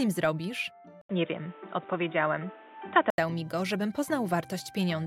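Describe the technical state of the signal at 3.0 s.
At 3.0 s the sound is dull and boxy, with nothing above 3.8 kHz and a new noise floor roughly 30 dB down. The level holds steady. An 80 ms gap at 1.01 s starts this span, which ends at 3.18 s. The likely cause is an input switched to a poorer device with a narrower band.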